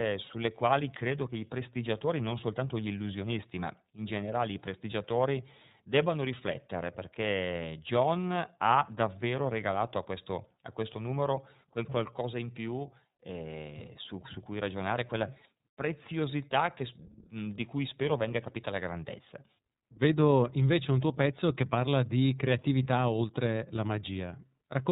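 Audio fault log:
throughout, iLBC codec: The speech is narrowband and muffled, with nothing above about 4 kHz, and it has a plainly audible rough, slightly synthetic edge. The codec models each frame's excitation on its own rather than building on the previous frame, and at this rate the modelling is coarse enough to add that grainy, artificial texture. The sound points to iLBC's 13.33 kbps mode with 30 ms frames.
22.83–22.86 s, lost iLBC frames: Right after "pezzo che parla di", the speech briefly turns into a short held, faintly buzzy or breathy tone instead of the real sound. Normal speech returns at once with "oltre la". The decoder covered the missing audio by repeating the last pitch cycle mixed with noise. Because each iLBC frame decodes independently, recovery is immediate. The gap fits one lost 30 ms frame.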